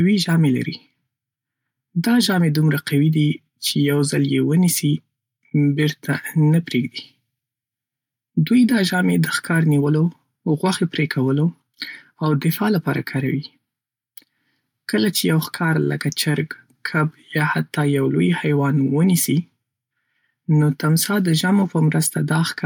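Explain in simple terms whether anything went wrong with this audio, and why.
Nothing went wrong here.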